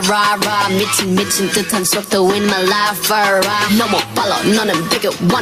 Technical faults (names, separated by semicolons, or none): gain pumping